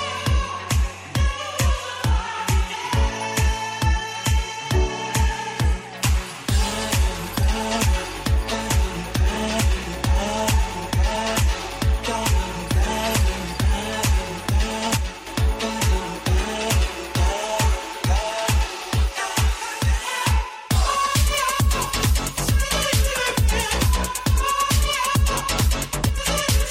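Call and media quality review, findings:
Likely one channel drops out upstream of the mono downmix, at 14.97–15.27 s and 26.09–26.18 s. Sound common to both sides falls abruptly by about 6 dB for 0.3 s and 84 ms, and content only in that channel vanishes, then returns.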